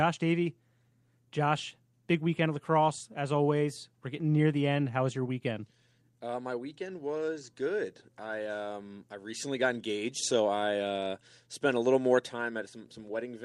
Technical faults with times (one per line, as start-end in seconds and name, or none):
none